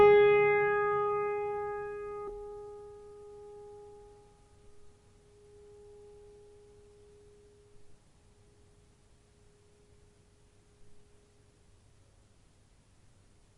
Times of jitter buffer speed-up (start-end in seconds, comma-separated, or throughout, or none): 2.37-3.23